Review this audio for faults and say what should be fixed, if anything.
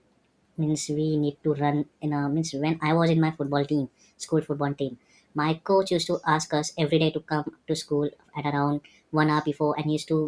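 Wrong sample rate throughout: the speech plays back faster than it was captured, with no rate conversion, which fits 16 kHz audio played at 22 kHz. Speed rises by 1.38 times and pitch by about 5.5 semitones, so the speech sounds high and hurried. Prevent this by reading each file's true sample rate and resampling to the device rate before playback.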